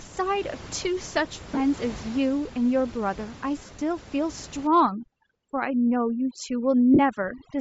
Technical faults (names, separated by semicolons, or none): Bluetooth LC3 compression; lost LE Audio frames; overdone noise removal